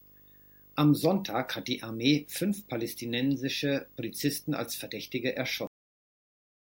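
Video or display buzz runs through the whole of this speech recording: a steady 50 Hz buzz, the field rate of a 50 Hz picture system, with a grainy hash riding above it and a thin, very high whine at 15.6 kHz from the line scan. It sits roughly 25 dB under the speech and points to a screen or video cable coupling its deflection and signal currents into the audio wiring or ground. A cut-off end follows at 5.67 s, where the sound stops mid-utterance and falls straight to digital silence with no natural decay. That abrupt drop means the final buffers of audio were never written out or played.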